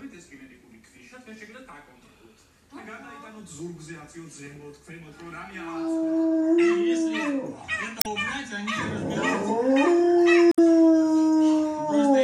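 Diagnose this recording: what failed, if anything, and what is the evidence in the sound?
The failure is at the codec stage: damaged data in a compressed stream, heard as two brief disruptions at 7.98 to 8.06 s and 10.50 to 10.59 s, each lasting roughly 80 to 90 ms. Corrupted bytes made the decoder misread frames, lose sync and hunt for the next valid frame header before recovering. On a spectrogram each event appears as a short break in the surrounding content. In the waveform there is an abrupt discontinuity at either edge.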